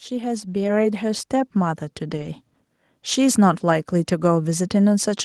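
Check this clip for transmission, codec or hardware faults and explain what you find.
Two kinds of fault are present: a gain ramp at the start and two brief stretches rebuilt from error-correction data.

From 0.08 s to 2.42 s there is automatic gain rising. The gain control judged the input too quiet and raised its gain by about 8 dB over more than two seconds, so the speech and the background noise swell together.

At 0.63–0.69 s and again at 2.13–2.27 s, a lost packet was rebuilt from error correction. The decoder filled 40 ms, consistent with two packets, and then 80 ms, consistent with four, from low-bitrate copies carried in the following packets. There is no gap, but those moments sound rougher and noisier.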